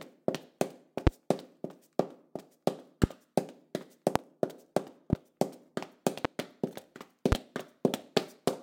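An everyday sound recording with six loud pops at 1.07–1.09, 3.04–3.06, 4.16–4.18, 5.13–5.15, 6.25–6.27 and 7.32–7.35 s. Each sharp pop stands far above the sound, likely from electrical pulses.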